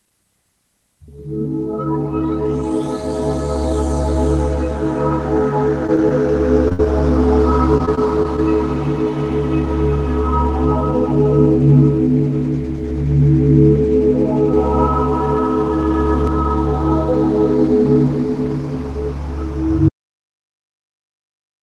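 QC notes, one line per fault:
5.87 s and 6.68 s, short concealed packet loss: tiny holes of about 20 ms got patched by stretching the last bit of sound, so you hear a quick smear or wobble.
6.73 to 6.81 s, burst of packet loss: about 60 ms went missing right after that, filled by a held, fading continuation before the sound jumps ahead with a chunk gone.
7.78 to 8.40 s, repeated packet loss (robotic sound): five small gaps in quick succession, each patched over, giving a choppy stretch with bits dropped out.
14.53 to 16.27 s, doubled audio track: a second copy at roughly equal level trails the original by roughly 150 ms, a hard, dry echo that switches on and off abruptly, likely a second capture path mixed in.
19.88 s to the end, audio dropout to silence: the sound cuts out mid-flow into silence with no room tone, likely the input dropping while the recording kept running.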